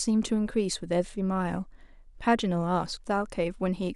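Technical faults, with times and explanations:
1.42 s, dropped samples: a single sharp click in the speech, heard as a thin vertical line across the spectrum at that instant. It is likely caused by a handful of samples, on the order of a tenth of a millisecond, going missing from the stream. The waveform jumps straight from one value to a later one, and that abrupt step spreads energy across all frequencies. The gap is far too brief to remove any audible sound.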